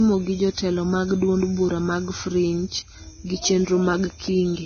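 Speech throughout, with nothing above 6.5 kHz and low-bitrate artefacts, so it's likely low-bitrate audio saved at a high bitrate: a roughly 17 kbit/s original re-encoded as 192 kbit/s MP3.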